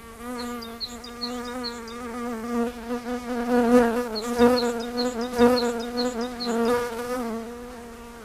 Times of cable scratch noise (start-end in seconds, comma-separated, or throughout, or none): none